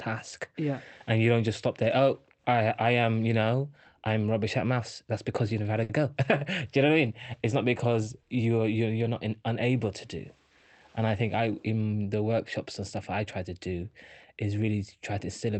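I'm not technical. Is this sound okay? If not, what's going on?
No, there are two small glitches, both from the way the audio travelled over a call connection, which also trims the sound above about 8 kHz.

At 5.83 to 5.90 s, just after "you never had a", there is a short stall from a late packet. A piece of the audio arrived late, so the system held the last sound for about 60 ms while it waited, then carried on. Nothing is lost. Unlike a dropout, the speech doesn't cut to silence or skip ahead. One sound just lingers a touch too long, perhaps with a faint buzz.

From 10.98 to 11.57 s, just before "in the workshops and", there is a jitter buffer speed-up. Audio had piled up waiting to be played, so the system trimmed many tiny slivers, roughly a twentieth of a second in all, to catch up. The speech runs about 9% fast and sounds slightly hurried. Unlike a sped-up tape, the pitch stays the same, so the voice doesn't go higher.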